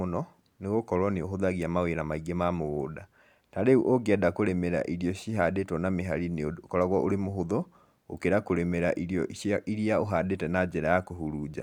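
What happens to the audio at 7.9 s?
Nothing goes wrong at 7.9 s; the speech carries on intact through that moment, with no dropout, click, glitch or other fault to be heard.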